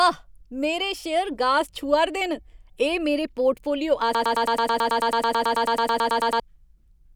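Broken-record loop from 4.15 to 6.40 s in this speech recording: a 109 ms fragment repeats back to back about 21 times, likely from a stalled player or stream resending its last buffer.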